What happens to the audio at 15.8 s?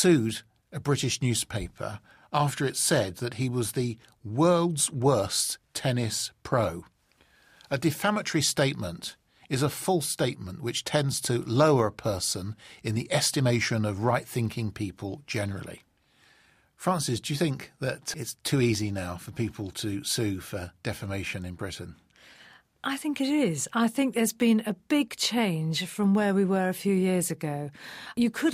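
Nothing goes wrong at 15.8 s: the speech runs through that moment intact, with no dropout, click or distortion to be heard.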